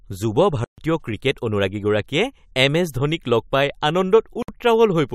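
A speech clip whose sound abruptly drops to silence from 0.64 to 0.78 s, about 137 ms, then resumes where it left off, likely a playback stall from the player running short of data or being blocked. At 4.42 s a 59 ms hole opens with smeared edges before the speech continues, a gap at a join of encoded pieces, where untrimmed encoder delay and final-frame padding left silence between separately encoded segments.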